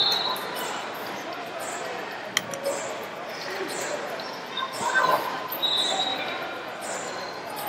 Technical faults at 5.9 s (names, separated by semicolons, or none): none